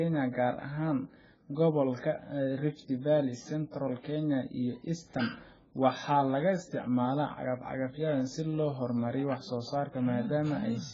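From start to finish the speech sounds dull and smeared, with a warbling, fizzy texture on sustained sounds and sibilants, most likely from heavy AAC compression at a very low bitrate, which fits roughly 12 kbps AAC-LC. The encoder discards high-frequency content and coarsely quantises what remains. On a spectrogram the energy stops at a hard ceiling near 7.6 kHz, with patchy holes and blotchy noise-filled bands below it.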